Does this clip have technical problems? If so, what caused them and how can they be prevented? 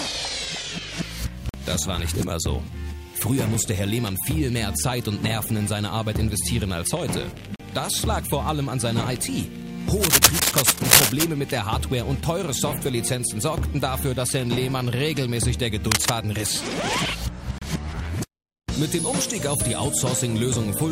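Yes. A gap between stream segments leaves hard-edged silent holes at 1.49 to 1.54 s (47 ms), 7.56 to 7.60 s (37 ms) and 17.58 to 17.62 s (31 ms). Mismatched segment timestamps insert silence, and no audio is lost, unlike a dropout. Aligning segment timestamps at the packager prevents it.

Cable scratch noise produces dense, uneven rustling bursts from 9.97 to 11.25 s, about 5 dB above the sound, and from 15.91 to 16.12 s, at about the same level as the sound. Unlike isolated clicks, these bursts are dense, and they likely come from a worn cable or connector being moved. Replacing or securing the worn cable prevents it.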